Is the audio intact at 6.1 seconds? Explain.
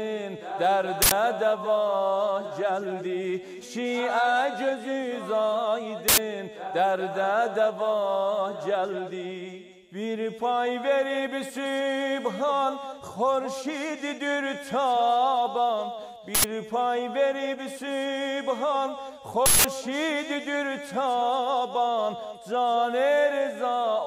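No. From 6.08 to 6.18 s the audio is replaced by an uninitialised buffer: a block of output was sent to playback before any audio had been written into it, so whatever data remained in that memory was played as samples. The result is a short, loud burst of harsh digital noise lasting about 93 ms, a span which fits a 4096-sample block.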